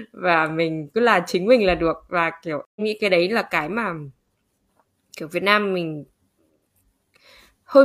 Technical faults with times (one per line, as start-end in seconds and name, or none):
2.65-2.81 stream reconnect